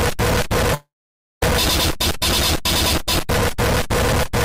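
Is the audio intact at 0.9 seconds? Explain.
No. A long network dropout likely removed about 0.68 s, from 0.74 to 1.43 s. The last sound trails off as a fading buzz or hiss into silence. The waveform flattens to a near-zero line, and the spectrogram shows smeared energy dying into a blank gap.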